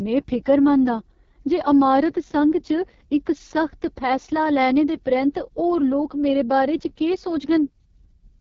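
The whole clip goes through the AMR wideband (HD Voice) codec. The heavy rasp and roughness point to its lowest 6.6 kbit/s mode, and nothing comes through above 7.4 kHz.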